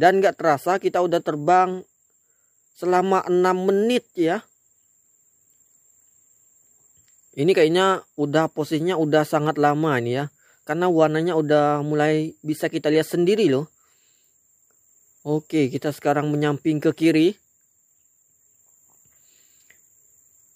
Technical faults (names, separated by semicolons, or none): none